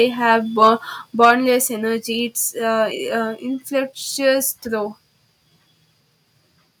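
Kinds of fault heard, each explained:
Microphone overload: at 0.62–0.69 s and 1.22–1.31 s, peaks flatten with a harsh crackle, about 1 dB then about 5 dB over, likely from excessive input volume.
Microphone volume stepped down: at 1.25 s, amid the second distorted peak, everything drops about 2 dB at once, likely the software cutting the microphone's input volume.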